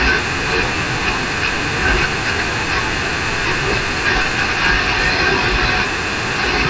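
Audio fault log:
Throughout: wrong sample rate. The speech plays at about two thirds of its proper speed and roughly seven semitones low, both shifting together. That ratio points to audio captured at 24 kHz being played back at 16 kHz without any rate conversion.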